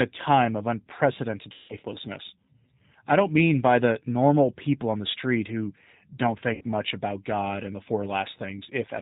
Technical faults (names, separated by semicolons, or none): G.729 codec; VoIP packet loss concealed by the speech codec